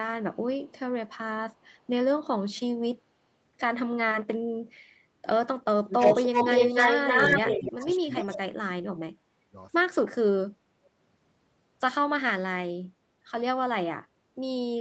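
From 5.78 to 5.94 s the sound dips by about 25 dB. This is speech suppressed in double talk, likely an echo canceller turning down its own talker along with the loudspeaker echo while both were talking. From 5.98 to 7.87 s a copy of the speech returns 299 ms late and about 5 dB louder than the original. This is an echo leak, likely a loudspeaker's echo getting past the canceller. Overlapping that stretch, two more double-talk suppressions cut the sound: one at 6.28 to 6.37 s by about 20 dB, and one at 7.42 to 8.15 s by about 15 dB. The delayed echo comes back at 8.16 to 8.40 s, about 5 dB below the speech. A deeper double-talk suppression, of about 35 dB, then chops the sound from 8.36 to 9.57 s. A last, barely audible scrap of echo, about 40 dB down, passes at 10.84 to 10.88 s. All the audio stops at 8 kHz, which fits the Opus call path.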